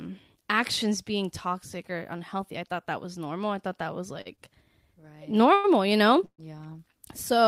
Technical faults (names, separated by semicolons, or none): short stall from a late packet; call audio freeze